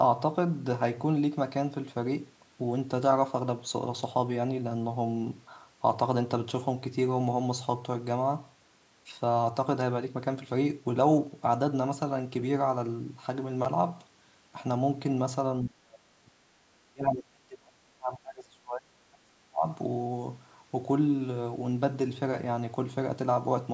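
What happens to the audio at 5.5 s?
Nothing goes wrong at 5.5 s: the speech runs on intact through that moment, with only the ordinary bass trimming of call microphone processing.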